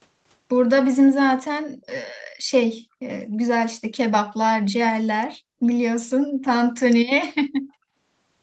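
At 1.82 to 1.9 s a brief, faint echo leak appears: a delayed copy of the speech, trailing the original by about 223 ms and sitting very low, roughly 35 dB under the direct voice. It is most likely leftover loudspeaker sound that the far side's echo canceller failed to subtract. On a spectrogram it shows as a weak, smeared ghost of earlier speech energy, and in the waveform it is barely visible.

The background is then gated by the echo canceller three times. At 5.37 to 5.62 s and again at 6.23 to 6.41 s, the room tone drops by about 40 dB. At 7.66 to 7.78 s it dips by about 29 dB. Each time, the canceller clamped the microphone while the loudspeaker was active, so the ambience briefly vanishes and then snaps back. In the waveform these are sudden flat troughs in the noise floor. On a spectrogram they are short vertical dark gaps across the band, which stops at 8 kHz.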